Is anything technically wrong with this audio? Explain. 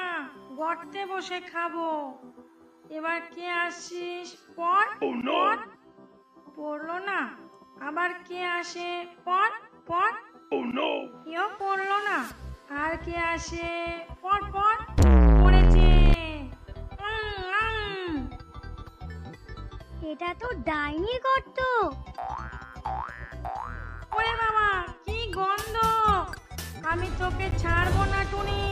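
Yes. Near the end, from 27.51 to 27.54 s, there is a corrupt frame decoded: a single damaged compressed frame that the decoder played instead of concealing or dropping. Flipped bits in that frame gave the decoder wrong gain values or misread spectral codes, so it placed energy at frequencies that don't belong to the sound. The result is a short chirp, squeak, blip or burst of noise of about 28 ms, peaking at about -15 dBFS.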